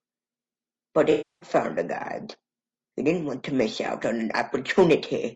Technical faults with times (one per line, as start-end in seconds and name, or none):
0.00-5.35 low-delay AAC compression
1.11-1.49 AAC frame loss with concealment